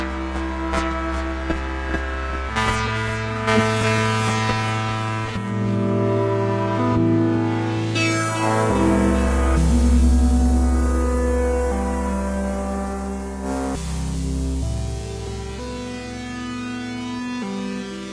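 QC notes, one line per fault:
No faults turned up anywhere in this one, so there's nothing to flag.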